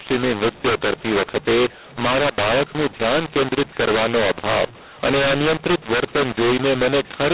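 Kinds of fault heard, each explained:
mu-law and A-law mixed up: the telephone speech was encoded with mu-law but decoded as A-law, so every sample's level is remapped wrongly throughout. The result is harsh, grainy distortion and noise filling the pauses. Unlike clipping, which only damages peaks, the quiet passages are damaged too.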